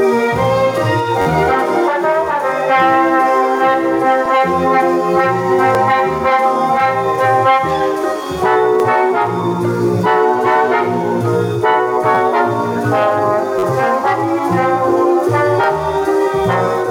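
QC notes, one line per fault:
1.22–1.26 s and 13.59–13.63 s, repeated buffer: new audio missed its deadline, so the device replayed its last 10.7 ms block four extra times, which fits a 512-sample buffer. The looped slice and its hard joins produce a brief buzz.
12.15–12.17 s, repeated buffer: the same underrun replays the block twice more. The repeated 10.7 ms fragment sounds as a tiny stutter with a click at each join.
4.26 s, 5.75 s, 8.80 s and 15.64 s, repeated buffer: each time one block plays a single extra time. No audio is skipped and the sound afterwards is only pushed later. Each join is heard as one sharp click.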